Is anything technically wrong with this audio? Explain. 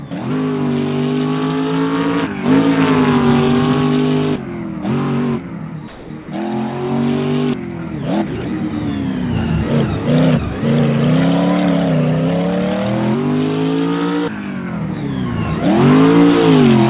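Yes. From 5.88 to 6.10 s the sound gives way to about 220 ms of steady, featureless noise, and roughly 100 ms of the actual sound is missing inside that gap before it returns. This is likely sound dropped by the voice detector: the sending side judged that stretch to be background and stopped transmitting, so the receiver filled the gap with synthetic comfort noise until detection picked up again. Throughout the clip, nothing is heard above 4 kHz, which fits a narrowband call codec.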